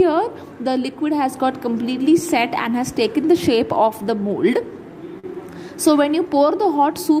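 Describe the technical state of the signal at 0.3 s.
At 0.3 s the signal is intact, with no audible fault at that moment.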